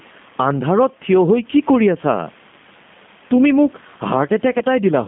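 Gain pumping runs through the whole recording. The level swings by roughly 10 dB whenever the speech gets loud, which squashes loud and soft passages together. The likely cause is input gain set far too high, with a fast limiter clamping every peak.

G.729 coding also affects the entire clip. The speech is confined to a 150 Hz to 3.5 kHz line band and sounds rough and slightly synthetic, with plainly audible damage. The sound is rebuilt from a vocal-tract filter, a pitch predictor and sparse pulses, which fits an 8 kbit/s G.729A codec. The room noise sits about 36 dB below the speech and warbles under this coding.

VoIP packet loss concealed by the speech codec occurs from 4.59 to 4.63 s. The decoder repeats its last pitch and filter settings, so a brief fading buzzy tone or coloured noise replaces the missing sound, which points to a single lost packet of about 20 ms. Because each frame builds on the one before, the speech stays weakened until shortly after the packets return.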